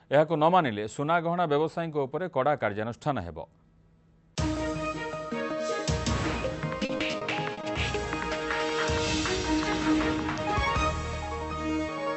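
From 6.85 to 7.77 s, repeated packet loss (robotic sound) breaks up the audio. Seven gaps, the longest 40 ms, are each patched by extending the previous sound. Around a fifth of that stretch is concealed. It sounds choppy, with pieces missing.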